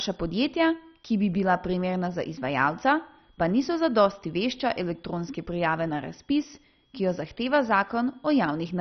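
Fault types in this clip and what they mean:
MP2 compression: The speech sounds dull and gurgling, with granular distortion and nothing above about 6.1 kHz, which fits a heavily squeezed stream near 32 kbps. Likely MPEG Layer II starving its upper sub-bands, unlike a plain low-pass cut, which leaves no granular gurgle.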